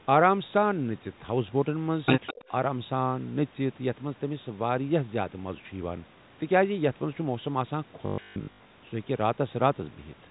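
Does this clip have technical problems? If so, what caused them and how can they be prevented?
Yes. Echo leak, 2.26 to 2.34 s: a faint copy of the sound returns 203 ms late, about 15 dB down, likely from a loudspeaker echo canceller that failed to remove it. Using a headset or a better-tuned echo canceller would prevent it.

Speech suppressed in double talk, 2.33 to 2.5 s: the level dips by around 30 dB for roughly a tenth of a second, likely as both sides overlap. An echo canceller with better double-talk detection would keep the talker through the overlap.

Packet loss with last packet repeated, 8.06 to 8.7 s: 460 ms went missing across 640 ms, with runs up to 140 ms. The receiver replayed the last packet each time, causing a robotic buzz near 50 Hz, which points to 20 ms packets. A more stable network, or a receiver with proper loss concealment or forward error correction, would prevent this.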